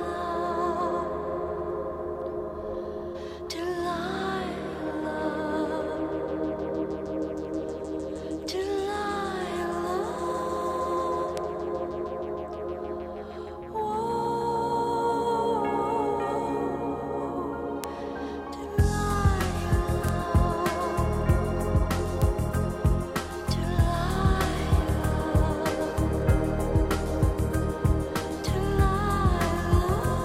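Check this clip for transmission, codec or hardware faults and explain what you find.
Four bit error spikes occur, at 11.37, 17.84, 20.09 and 22.22 s, each peaking near about −8 dBFS (about −14 dBFS at 11.37 s). A flipped bit jumps one to three samples by a power of two, giving one broadband tick unrelated to the sound. Unlike a dropout or splice click, nothing goes missing.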